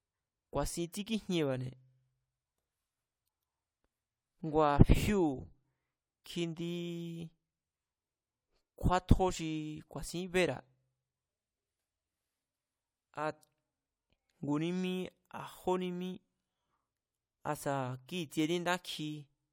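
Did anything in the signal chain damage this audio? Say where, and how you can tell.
No, nothing in the signal chain audibly damaged this speech.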